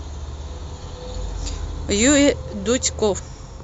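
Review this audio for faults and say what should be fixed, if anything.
At 1.14 s and 3.18 s the speech jumps ahead with a brief smeared blip: compressed frames skipped, losing roughly 150 and 300 ms, consistent with dropped 26.1 ms frames. Check file integrity and transfer so no frames are corrupted or discarded before decoding.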